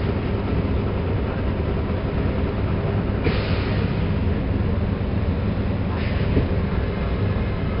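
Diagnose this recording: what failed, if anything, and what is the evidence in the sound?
The codec stage failed: 4-bit ADPCM compression, heavy throughout. A gritty hiss rides on every loud passage and rises and falls with the level, because each sample is stored only as a coarse 4-bit step from a prediction. On a spectrogram, broadband noise tracks the louder regions, and nothing appears above 5.3 kHz. This points to a low sample rate and a rate of about 44 kbps.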